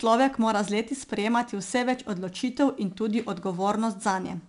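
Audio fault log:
throughout: 4-bit ADPCM compression. Each sample is stored as a coarse step from a prediction. The error is a gritty hiss that rises and falls with the speech. Nothing passes above 10.6 kHz, which fits a sample rate near 22 kHz and about 89 kbps.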